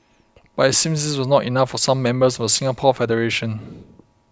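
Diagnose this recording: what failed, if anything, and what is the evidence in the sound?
Nothing failed: the speech carries no audible defect at any stage of the chain, so there is no evidence of a fault to report.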